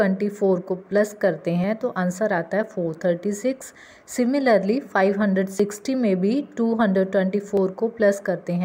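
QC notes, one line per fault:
1.64, 3.62, 5.6 and 7.57 s: audio missing between chunks. Four short skips about 2 s apart, each dropping a sliver of roughly 20 ms with the two sides butted together. That likely comes from a chunked recorder losing a moment at each 2 s handover.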